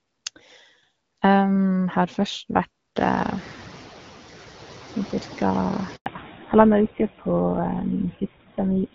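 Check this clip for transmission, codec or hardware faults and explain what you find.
Four faults are audible in this speech clip: constant suppression side effects, a lagging suppressor after a noise surge, a short dropout, and a drop to narrowband audio.

Noise suppressor artifacts, throughout: the background pumps down in pauses and swells back under speech. A suppressor is cutting bands it judges to be steady noise, by about 8 dB, frame by frame.

Noise suppressor catching up, 2.96 to 3.83 s: the room noise jumps sharply around 3 s, by about 22 dB, and at first passes through with less reduction, only about 4 dB, before settling lower. The suppressor's noise estimate needed about 870 ms to adapt to the new level.

Handover gap, 5.96 to 6.06 s: the voice fades out abruptly and there is 100 ms of silence before audio returns, and whatever fell inside that span is gone. The call was switched between networks, and no speech frames arrived during the transfer.

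Fallback to narrowband, 6.06 s to the end: right after the gap the voice turns muffled and rougher, with nothing above 4 kHz. The sound before this point, with its light wideband coding consistent with AMR-WB at around 12.65 kbit/s, points to the new link carrying an older narrowband codec, likely GSM full rate.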